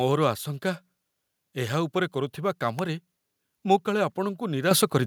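An electrical switching spike lands at 2.79 s: a sharp, isolated snap sitting on top of the speech, lasting only a few milliseconds. It is most likely a nearby switch, motor or static discharge arcing briefly, with the audio line picking up that burst.

A microphone volume step-up follows at 4.71 s, where the speech and the background noise behind it jump up together by about 8 dB in a single move. This is the call software deciding the input was too quiet and raising the device's capture level at once.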